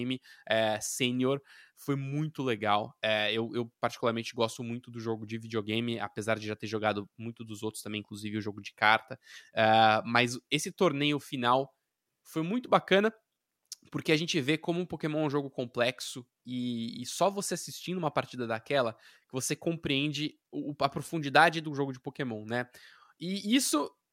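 No technical faults are audible.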